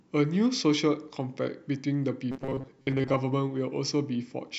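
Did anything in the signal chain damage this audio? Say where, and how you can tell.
Yes. From 2.32 to 3.17 s the speech turns into a rigid, metallic buzz pinned at 134 Hz. The words remain roughly traceable. This is robotic sound from repeated short buffers, most likely at the driver or buffer stage. New audio arrived too seldom, so a fragment of about 7.5 ms was looped to fill the gaps, and that loop period sets the 134 Hz tone. Roughly half of this stretch is repeated material, and the genuine audio it replaced was skipped.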